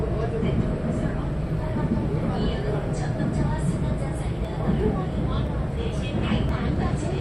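From 4.45 s to 6.49 s there are periodic USB or driver dropouts: something blocks the audio path about every 1.02 s, knocking roughly a millisecond of sound out to silence each time. You get three small, evenly spaced ticks while the sound is playing.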